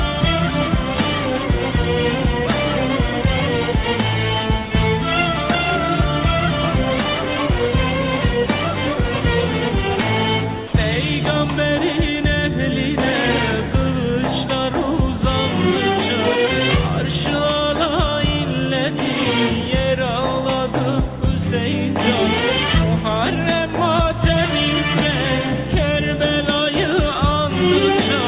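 At 10.67 s the sound breaks off for 60 ms and is replaced by a thin, steady hiss before it resumes at 10.73 s. This is sound dropped by the voice detector, likely because the sender judged that moment to be background and stopped transmitting, with the receiver filling the gap with comfort noise. On a waveform the signal collapses to a flat, low-level band, and a spectrogram shows a short, featureless noise patch interrupting the sound's structure below the call path's 4 kHz ceiling, which fits G.711 mu-law.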